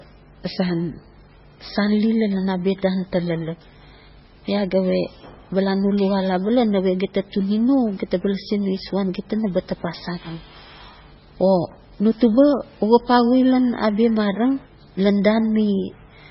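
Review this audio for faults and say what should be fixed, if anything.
Throughout the speech, the sound is heavily degraded: nothing reaches above about 5.6 kHz, and what remains has a watery, swirling texture, with s sounds turning into metallic chirps and consonant attacks smearing. This is likely MP3 compression at a very low bitrate, around 16 kbps. Short of bits, the encoder cut the treble at a fixed point and dropped weak frequency lines, which then flicker in and out from frame to frame. A plain low-pass filter would dull the top end without adding that swirl or chirping. Prevent it by encoding at a much higher bitrate or keeping an uncompressed master.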